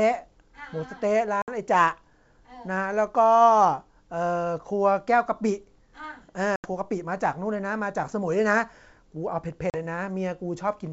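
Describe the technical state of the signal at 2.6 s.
At 2.6 s the speech is intact, carried cleanly through G.722 wideband telephone coding at 64 kbit/s with no fault at that moment.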